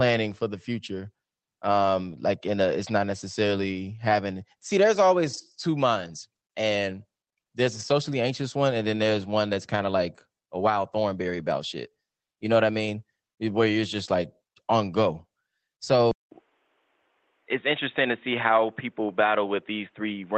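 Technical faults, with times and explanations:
5.33 to 5.39 s and 7.79 to 7.81 s, lost packet rebuilt from error correction: Two brief stretches turn grainy and noisier, about 40 ms at 5.33 s and 20 ms at 7.79 s, with no gap in the sound. The timing fits two lost Opus packets at the first point and one at the second. The following packets each carried a low-bitrate backup copy, and the decoder played those rougher copies in place of the originals.
16.11 s to the end, input switched to a poorer device: At 16.11 s a silence of about 200 ms is followed by a duller, boxier sound with nothing above 3.8 kHz. Before the switch, the Opus call path carries content up to 8 kHz. The loudness stays roughly the same, and a new, faint background noise appears far below the voice. The likely cause is the system changing its input to a narrower-band microphone or a headset's call profile.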